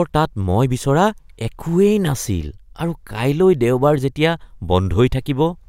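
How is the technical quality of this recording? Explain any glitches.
The recording's technical quality is sound, with no glitches or signal faults to be heard anywhere in the speech.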